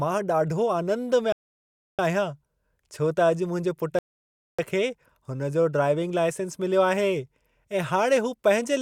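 At 1.32 s the speech halts in a rebuffering stall: the player's buffer ran dry, so it waits in silence until 1.99 s, adding 0.66 s, then resumes exactly where it stopped. A second stall runs 3.99–4.59 s, adding 0.60 s. Both show as flat waveform gaps and blank spectrogram columns.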